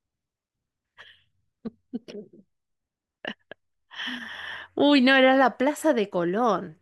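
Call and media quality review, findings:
Gap between stream segments at 0.49 s: hard-edged hole of about 6 ms. Segment join in the packager/player; timestamps leave a short gap, filled with silence. Unlike a packet dropout, no audio is lost; the following audio arrives about 6 ms later.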